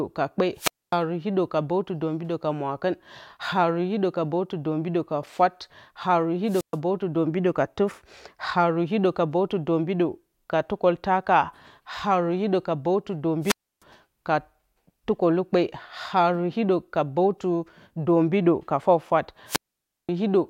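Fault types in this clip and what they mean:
Wireless microphone squelch dropout: the FM radio link weakens until the receiver's squelch shuts its output, so the speech breaks into a rise of hiss and then a near-silent hole four times, at 0.56, 6.46, 13.41 and 19.46 s, with mutes lasting 0.12 to 0.53 s.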